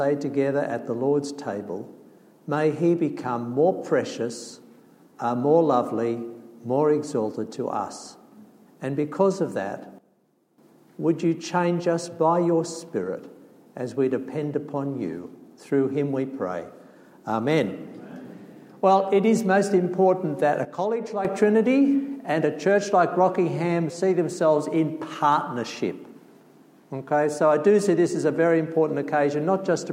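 At 9.98 s the whole sound, background noise included, drops abruptly by about 12 dB for 0.6 s, and at 20.65 s by about 9 dB for another 0.6 s. This is a sudden gain jump, likely a digital gain change applied instantly with no ramp.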